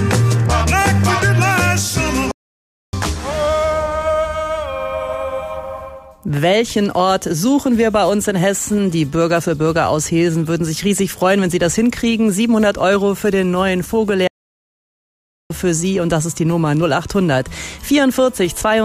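At 2.31 s the sound cuts out mid-flow and stays silent until 2.93 s, a gap of about 0.62 s. This is a playback stall. The same thing happens again at 14.27 s, lasting until 15.50 s, about 1.23 s of silence. Both gaps are abrupt dropouts to nothing, not fades. The likely cause is the player running short of data, or its thread being blocked, so output halts until it recovers.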